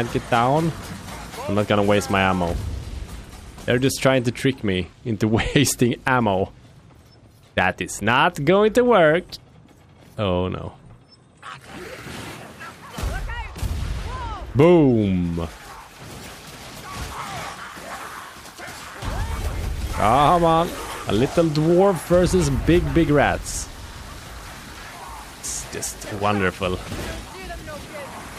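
No technical faults can be heard anywhere in the recording; the signal stays continuous and steady throughout, with no interruptions or disturbances to point to.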